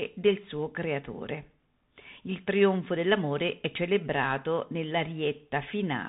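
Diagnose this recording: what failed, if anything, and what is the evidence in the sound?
The codec stage failed: the speech carries Bluetooth CVSD headset codec damage throughout. Nothing passes above 4 kHz, s sounds turn scratchy, and granular hiss sits under the speech. That fits one-bit delta modulation at 64 kHz, whose adapting step lags loud high sounds, unlike a clean band-limit.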